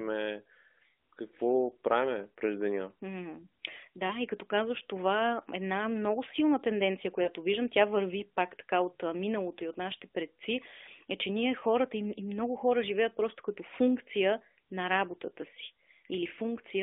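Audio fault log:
4.08 to 4.16 s, 7.22 to 7.28 s and 11.60 to 11.64 s, lost AMR speech frames: brief concealment dropouts where the decoder replays the last good pitch and vocal-tract settings at falling gain. The first, before "и като казваш това", and the last, after "предци е че ние", are single 20 ms frame losses heard as short dips. The middle one, between "една много силна тенденция" and "виждам тя върви пак", spans about 40 ms, two frames, and gives a drawn-out sound over the 250 Hz to 3.6 kHz mobile band.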